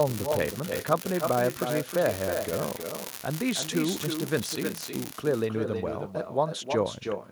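From the start and for the whole clip there is echo with no canceller. The far end's loudspeaker feeds its microphone and nothing removes it, so each phrase returns about a third of a second later, only about 6 dB down and thinner. Its fixed delay and lagging copy of the talker set it apart from natural room reverberation, which smears continuously rather than repeating.

Also from 0.0 s to 5.13 s, an unreliable data bit adds a steady crackle. One marginal data line flips its bit in a random share of samples, and each error makes a spike of identical size. The fizz persists through pauses, which distinguishes it from codec distortion that rides only on the speech itself.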